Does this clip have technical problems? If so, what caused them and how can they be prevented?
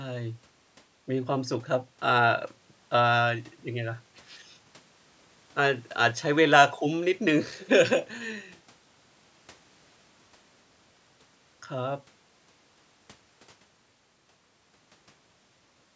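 No, there are no technical problems in this recording.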